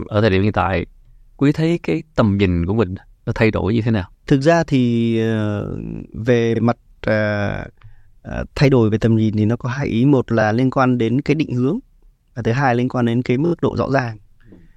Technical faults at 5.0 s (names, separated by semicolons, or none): none